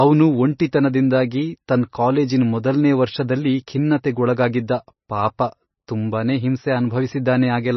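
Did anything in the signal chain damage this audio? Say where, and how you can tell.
Yes. Throughout, the speech sounds watery and swirly with nothing above 5.9 kHz, likely heavy MP3 compression at the codec stage, fitting a bitrate around 24 kbps.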